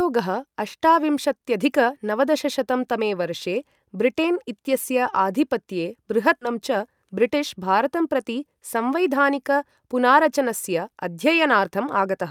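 A speech recording with a skip ahead at 6.41 to 6.43 s, where about a second of audio drops out with no fill, and playback lands directly on later speech. This is the sort of discontinuity left when buffered audio is discarded, probably because the jitter buffer overflowed while newer packets were already waiting. The cut removes roughly a second of delay in one step, and the two sides are spliced almost seamlessly, so the loss registers as an abrupt jump rather than a silence. From 6.51 s to the end, a jitter buffer speed-up runs the speech at 106% of normal rate while the pitch stays unchanged. The receiver is trimming short pitch-period segments repeatedly to drain excess buffered audio, taking out something like 0.4 s in total. The result is delivery that sounds slightly hurried across the whole final stretch.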